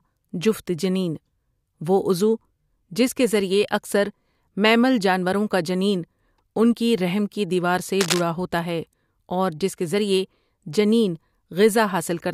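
From 8.00 to 8.21 s, cable scratch noise rasps over the speech, nearly as loud as it. A worn cable or connector shifting is the likely cause. On a spectrogram it shows as ragged broadband vertical streaks, and on the waveform as jagged, irregular spikes.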